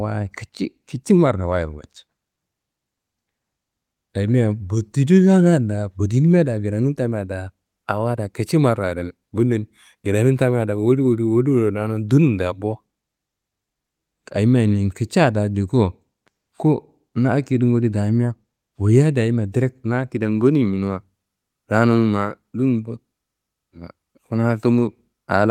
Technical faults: none

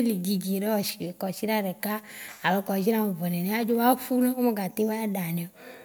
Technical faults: none

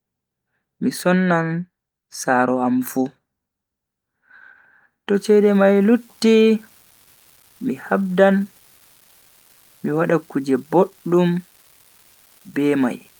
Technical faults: unreliable data bit

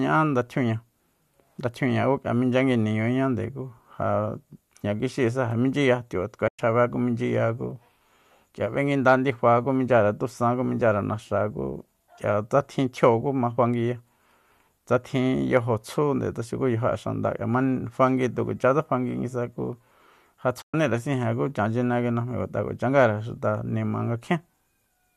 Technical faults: AAC frame loss with muting

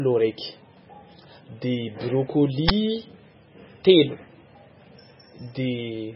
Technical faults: MP3 compression; uninitialised buffer

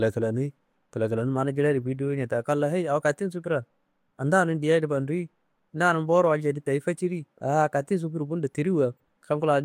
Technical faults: corrupt frame decoded

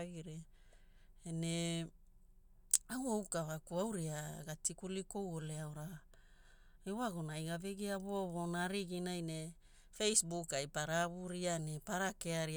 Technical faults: none

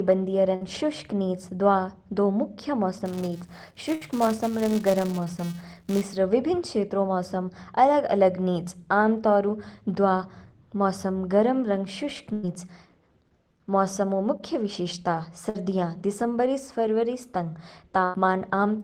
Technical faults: burst of packet loss; filter restarted on every block; short concealed packet loss

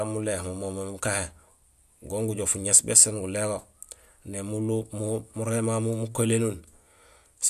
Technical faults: none

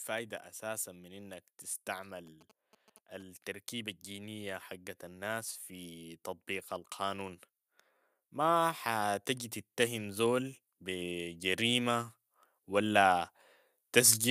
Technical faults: GSM signalling bursts; automatic gain rising

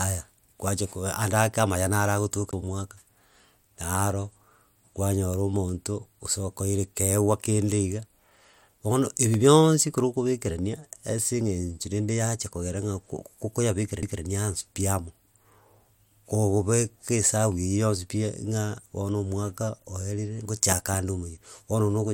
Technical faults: CD skip; loud pop

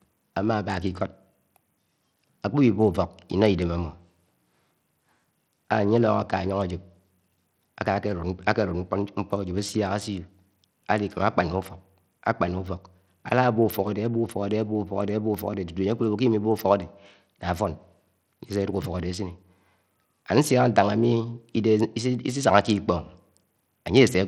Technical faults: Bluetooth SBC compression

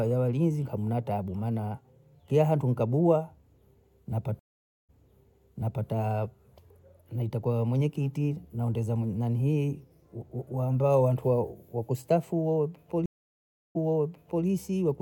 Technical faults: stream reconnect

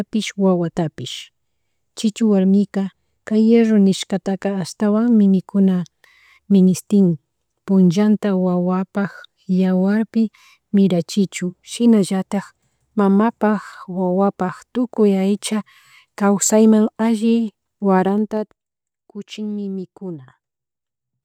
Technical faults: zipper noise

